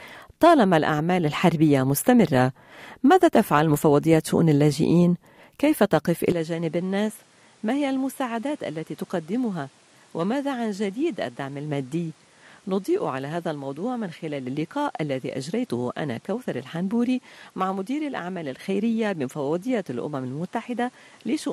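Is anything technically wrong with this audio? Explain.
Yes. From 6.32 s to the end, the sound changes character abruptly, most likely because the input switched to a poorer device partway through the recording. The new path passes nothing above 12.1 kHz, so the top end loses its air and the sound turns duller. The level drops by roughly 10 dB, and a new noise floor appears about 30 dB under the signal. The change happens instantly, with no gap at the switch.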